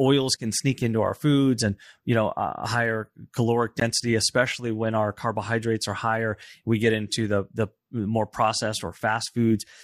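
A block of digital silence at 3.80 s: about 16 ms of the speech drops abruptly to silence and back, with no fade.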